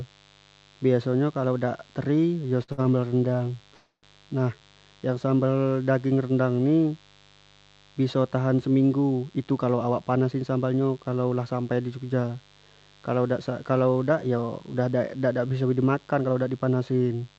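Switching spikes from the mains supply leak into the signal throughout, adding a steady, raspy 50 Hz buzz with high harmonics, about 30 dB below the speech.

At 2.63, 2.72 and 2.82 s, three packets in a row arrive late. Each time the receiver holds the last sound for 48, 57 and 31 ms, giving brief held-over stretches, but no speech is lost. These are short stalls from late packets.

From 3.74 to 4.05 s there is a call audio freeze, likely from packets held up on the way. The audio is extended for 290 ms and fades to 70 ms of silence before resuming at "nah yang sambal daging".

From 9.23 to 11.70 s, just before "di jogja", a jitter buffer speed-up removes roughly a third of a second of pitch periods. The speech runs at 111% speed and sounds hurried, but its pitch stays the same.

Just after "kalau dak", from 13.88 to 14.75 s, the same speed-up returns at 111% and cuts about a tenth of a second.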